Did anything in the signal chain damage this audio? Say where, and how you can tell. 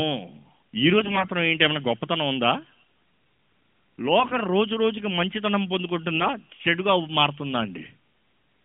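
Yes, on the network link: AMR bit errors at 0.98–1.30 s and 4.20–4.36 s. Flipped unprotected bits, around 7 percent, misplace excitation pulses and skew gain and spectral values, so pitch and level hold but the voice turns hoarse and gargly. Spectrograms show harmonics smeared into noise below about 3.4 kHz.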